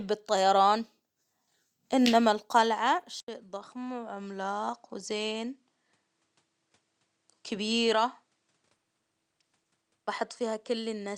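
At 3.20 s, right after "إنما القلعة", the sound cuts out for 80 ms and returns duller and about 10 dB quieter for the rest of the speech. This points to an input switched to a poorer device, most likely. On a spectrogram, content above 10.5 kHz vanishes from that point and a faint new noise floor, around 45 dB under the speech, appears. The waveform shows a short flat gap, then lower peaks.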